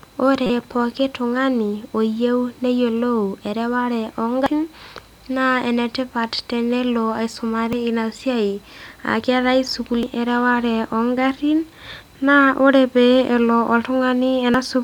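Speech with damaged data in a compressed stream, heard as five brief glitches. The first runs from 0.46 to 0.50 s, and the rest are momentary glitches at 4.46, 7.73, 10.03 and 14.54 s. Each marks a stretch where the encoded bytes were lost or corrupted, so the decoder misread the affected frames, lost sync and had to hunt for the next valid frame header before normal playback resumed.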